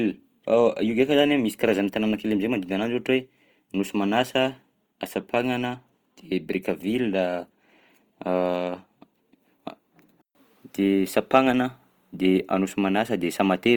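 Across the whole speech clip the sound is grainy and rough, with tonal parts of the voice turning noisy rather than swirling, which points to Opus compression in its music mode, likely at a low bitrate around 24 kbps. Short of bits, the encoder keeps each band's energy but fills its detail with folded or noise-like content. A spectrogram shows few holes yet a speckled, smeared texture in the upper bands, still reaching about 20.2 kHz.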